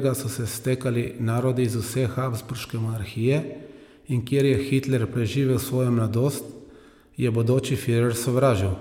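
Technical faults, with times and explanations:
No technical faults can be heard anywhere in this recording.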